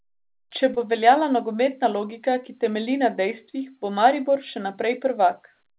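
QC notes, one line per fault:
0.74–0.79 s, short concealed packet loss: a brief smeared wobble just before "bo obveljala nogometna logika", where the sound seems to stretch for an instant and then slide back into place. About 30 ms of audio never reached the decoder in time, so the receiver covered the hole by prolonging the preceding sound for about 24 ms before blending back into the real signal. The surrounding band, with nothing above 4 kHz, fits a G.711 call codec.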